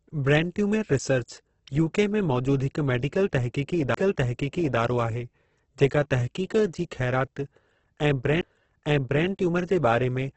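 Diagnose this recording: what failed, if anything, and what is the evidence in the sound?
The speech is grainy and rough throughout, with its tonal parts turned noisy rather than swirly, and nothing is heard above 8.2 kHz. The damage is heavy. This is likely Opus compression at the codec stage, running in its music (CELT) mode at a rate near 12 kbps. At that rate the encoder keeps each band's energy but fills starved bands with folded or noise content, and the wideband limit removes everything above about 8 kHz.

Two brief dropouts interrupt the playback stage: at 3.94 s, just before "आहे जेका", a mute of roughly 5 ms, and at 8.41 s, one of about 15 ms. Each is a tick-like gap after which the sound resumes from a different point rather than where it left off. This is a CD skip. The laser lost its track and landed on another turn of the disc's spiral, so the player briefly muted and then continued from the new position.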